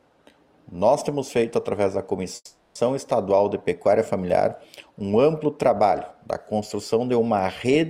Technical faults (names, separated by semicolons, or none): call audio freeze